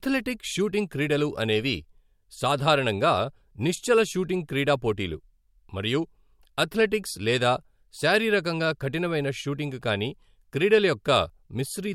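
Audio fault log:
No faults found in this speech recording.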